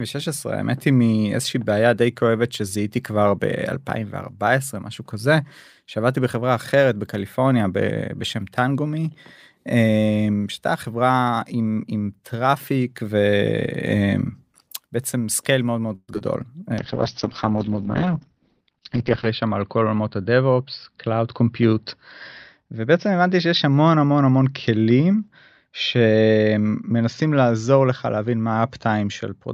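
At 15.95 to 16.10 s the audio stalls in a call audio freeze: the last sound is stretched into a fading buzz that ends in a brief silence, likely from delayed packets draining the jitter buffer. Nothing is lost, but a gap of about 0.13 s is inserted.

Two short concealed packet losses follow at 16.14 to 16.16 s and 16.18 to 16.22 s. Each time, about 20 ms of audio never arrived, and the receiver patched the hole by extrapolating, leaving quick smears.

From 16.80 s to the end a call bitrate drop sets in. The sound becomes coarse and muffled, and the bandwidth shrinks from 20 kHz to 6 kHz. This points to the encoder falling from around 48 kbps to roughly 7 kbps.

Between 18.02 and 19.11 s a jitter buffer speed-up trims about a tenth of a second of pitch periods to reduce the built-up delay. The audio plays 9% faster at unchanged pitch and sounds hurried.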